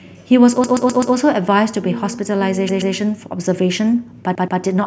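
Repeated buffer at 0.64–1.15 s, 2.69–2.94 s and 4.35–4.61 s: when fresh audio arrived late, the same 128 ms chunk of speech replayed with hard joins, heard as stutters.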